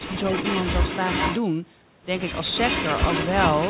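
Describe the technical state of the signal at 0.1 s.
At 0.1 s the speech is briefly pulled down by about 10 dB for roughly a tenth of a second, within 0.0 to 0.15 s. This is likely speech suppressed in double talk: with both sides talking, the echo canceller mistook this talker for loudspeaker echo and attenuated it.

From 0.1 s to 1.41 s a fainter second copy of the speech trails the original by 422 ms, sitting only about 5 dB below it. This is likely an echo leak, where a loudspeaker-side echo canceller failed to fully remove its microphone pickup and returned it across the G.711 call path, which carries nothing above 4 kHz.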